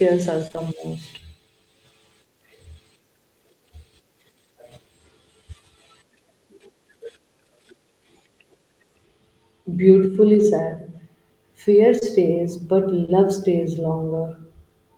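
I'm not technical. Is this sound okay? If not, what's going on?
No. Short concealed packet loss at 0.47 to 0.55 s, 11.99 s and 13.05 s: bits of the call, about 20 ms each, arrived too late, so the receiver guessed by stretching the preceding sound, leaving a brief smear or wobble.

Lost packet rebuilt from error correction at 0.55 to 0.61 s, 10.39 s, 12.01 s and 13.08 s: missing pieces were replaced with rougher backup copies carried in the next piece, so there's no gap, just a moment of harsher, noisier sound.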